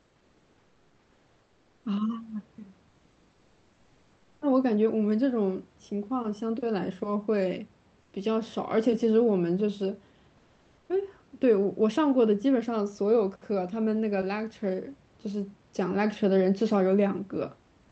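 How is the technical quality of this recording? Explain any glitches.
Speech over a call path that tops out around 8 kHz, with room noise sitting about 37 dB under the voice, and one recurring glitch stands out.

That glitch is comfort noise in place of the background, at 0 to 1.83 s, 2.89 to 4.41 s and briefly at 8.01 to 8.13 s. The real room noise gives way to a flat, featureless hiss about 2 to 3 dB quieter. The likely cause is discontinuous transmission on the sending side pausing the audio between speech, with the receiver filling the gap with synthetic noise.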